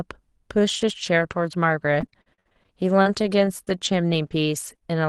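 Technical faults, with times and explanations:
0.67–4.83 s, repeated packet loss (robotic sound): recurring dropouts up to 55 ms, each patched by extending the last sound, so it turns choppy and robotic.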